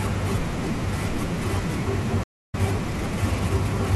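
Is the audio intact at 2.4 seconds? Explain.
No, 2.4 s falls inside a stream reconnect from 2.24 to 2.55 s. The connection dropped and the decoder restarted, leaving about 0.27 s of silence before the speech resumes roughly 0.3 s further on.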